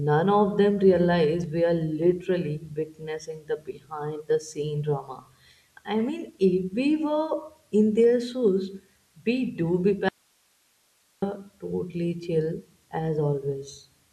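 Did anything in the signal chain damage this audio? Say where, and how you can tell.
Yes, an audio dropout to a faint residue, likely from an interrupted feed upstream, cuts the speech to hiss from 10.09 to 11.22 s. It appears as a sharp-edged, near-flat gap on the waveform.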